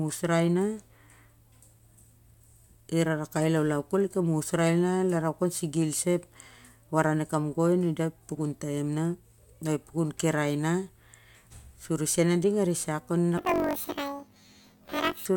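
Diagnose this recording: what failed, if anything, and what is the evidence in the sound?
Sample-format conversion slipped: from 13.38 to 15.27 s, planar audio read as interleaved. Each 21.3 ms block plays twice at double speed, so the speech jumps an octave with a 47 Hz flutter.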